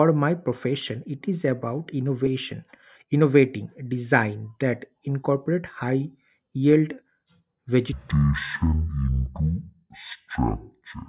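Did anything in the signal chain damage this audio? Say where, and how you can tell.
Yes. From about 7.93 s to the end at 11.09 s, the speech drops a full octave and slows to half speed, with pitch and tempo falling together. That's a wrong sample rate problem at the playback stage. The samples are clocked out at half the rate they were captured at, with no resampling, which fits 16 kHz audio being played at 8 kHz. Halving the rate stretches everything by two and pulls the pitch down 12 semitones.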